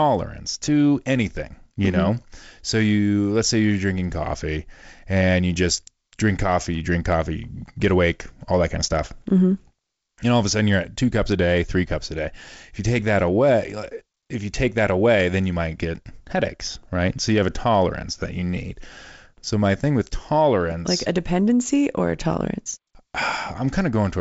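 There are no technical faults to describe in this speech at any point; the sound comes through G.722 wideband telephone coding at 56 kbit/s, with nothing above about 7.7 kHz.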